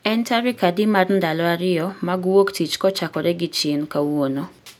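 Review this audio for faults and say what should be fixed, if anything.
No faults turn up in this audio, so there is nothing that needs to be fixed.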